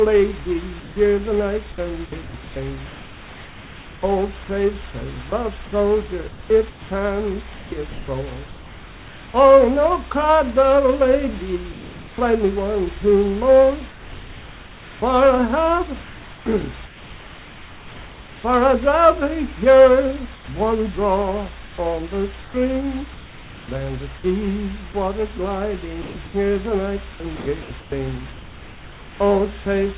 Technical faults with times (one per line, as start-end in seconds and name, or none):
0.80-9.34 sound chopped by the voice detector
11.72-12.18 comfort noise in place of the background
13.90-18.44 comfort noise in place of the background
20.34-27.92 sound chopped by the voice detector
29.64 sound dropped by the voice detector